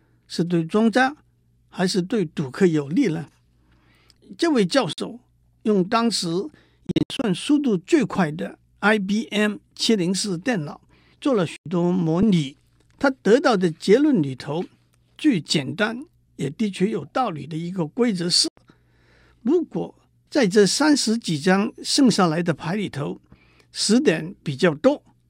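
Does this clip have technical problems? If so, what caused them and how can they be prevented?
Yes. The speech cuts to silence four times, at 4.93 s for about 46 ms, at 11.56 s and 18.48 s for about 93 ms each, and between 6.87 s and 7.24 s, where about 209 ms is lost in scattered gaps, the longest 70 ms. The likely cause is a Bluetooth dropout: packets reached the headphones too late and were discarded, so playback resumed as though it had kept running. Keeping the headphones close to the source with a clear line of sight and away from Wi-Fi interference should prevent this.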